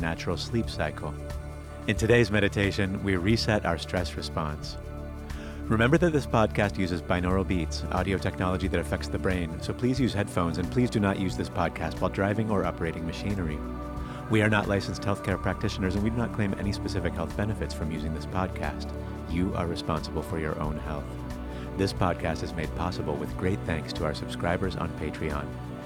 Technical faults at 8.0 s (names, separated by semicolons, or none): none